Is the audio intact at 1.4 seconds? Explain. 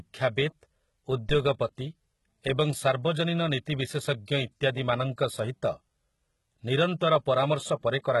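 No. From 1.29 to 1.40 s there is a deep thump that dies away within about 25 ms. This is a phantom power thump: a supply switched on or off on the live input sends a sudden voltage step through the coupling capacitors.

The sound at that moment also carries heavy codec damage: nothing remains above 11.8 kHz, and the top band sounds synthetic rather than natural. The likely cause is HE-AAC compression at a very low rate, which fits roughly 16 kbps. This codec keeps only the lower spectrum and rebuilds the treble by copying lower bands upward.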